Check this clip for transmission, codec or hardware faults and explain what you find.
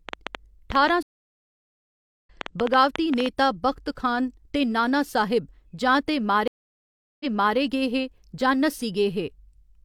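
Three faults are audible: a train of clicks and two stream reconnects.

Train of clicks, 0.09 to 3.27 s: about 30 sharp, similar pulses arrive irregularly at roughly 8.75 per second, peaking about 15 dB above the speech. They tick through pauses too, likely from interference by nearby equipment or a faulty connection or power supply.

Stream reconnect, 1.03 to 2.28 s and 6.48 to 7.57 s: the connection dropped, the player fell silent and restarted its decoder mid-stream. The first gap lasts 1.2 s and speech resumes roughly a second later. The second gap, after "नाना साहिब जां ते", lasts 726 ms, and "गे हे" resumes 372 ms earlier, repeating material the server resent.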